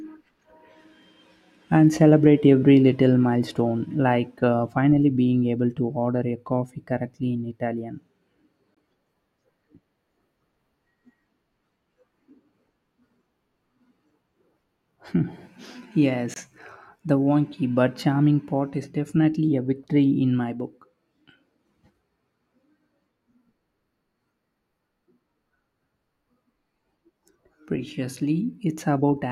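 At 8.75 s and again at 16.34 s the speech drops into abrupt silence for about 30 ms and 44 ms, each gap consistent with two lost frames. This is a corrupt frame muted fault: damaged compressed frames were rejected by the decoder and replaced with silence, so timing stays intact.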